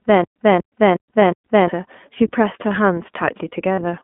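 iLBC codec damage runs through the whole clip: everything is confined to roughly 200 Hz to 3.4 kHz, and each 20 ms frame is coded on its own, leaving the speech clear but grainy and synthetic. The rate fits iLBC's 15.2 kbps mode.

A stutter with silent gaps is already under way at the start and lasts until 1.69 s. A 240 ms burst repeats four times, each followed by about 121 ms of dead silence, a 362 ms cycle. The likely cause is a stalled stream replaying its last fragment before running empty, so the audio meant for that stretch is lost.

Lost iLBC frames occur at 1.20 to 1.22 s and 3.74 to 3.79 s. The first gap is about one 20 ms frame and the second about 40 ms. In each, the decoder repeats the last pitch cycle blended with noise, producing a brief held, buzzy vowel, and the speech recovers almost immediately afterwards.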